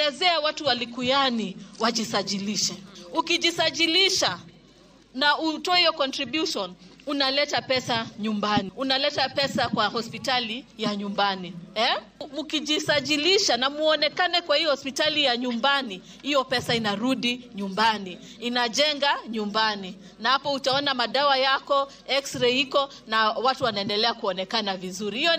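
From 1.85 s onward, imaging from linear upsampling: straight-line interpolation from 22 kHz to 48 kHz dulls the top and leaves faint images at 11–22 kHz, a light metallic shimmer.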